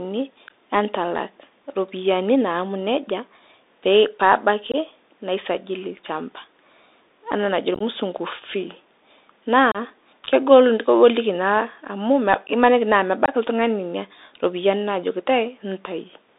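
Throughout the speech, the Bluetooth CVSD headset codec is plainly audible. This one-bit delta coding, which fits a 64 kbps link, confines the sound to about 250 Hz to 3.7 kHz, leaving the spectrogram empty above 3.7 kHz. A granular hiss sits underneath, and s sounds turn scratchy where the adaptive step cannot keep up.

Unconcealed Bluetooth headset packet loss occurs at 4.72–4.76 s, 7.74–7.82 s, 9.72–9.77 s and 13.26–13.34 s. Lost packets were replaced by silence or an idle pattern, leaving abrupt holes. At 7.74 s the loss is scattered into several short gaps and sounds choppy. The waveform shows dropouts with sheer edges, and the spectrogram shows vertical strips.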